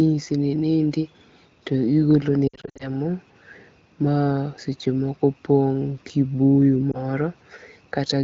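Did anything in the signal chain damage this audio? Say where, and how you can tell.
Yes. Network/radio stage: lost AMR speech frames. Between 2.48 and 2.89 s, scattered frames fail their checksum and the AMR-WB decoder repeats the last pitch and vocal-tract settings at falling gain, causing brief warbles and dips. A single lost frame near 6.91 s gives one short dip.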